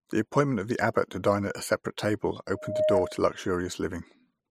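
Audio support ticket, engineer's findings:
Loudspeaker feedback squeal, 2.55–3.26 s. Mic-to-speaker loop gain above unity at 615 Hz; the tone swells over roughly a third of a second to about 5 dB above the speech.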